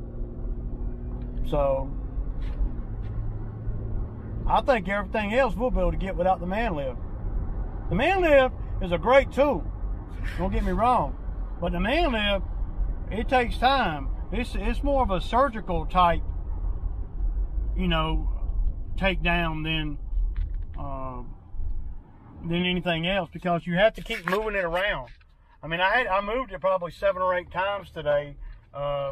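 The audio skips ahead briefly at 7.92 s, 11.66 s and 18.14 s, a sign of compressed frames skipped. Each jump drops roughly one frame, consistent with a 23.2 ms frame length.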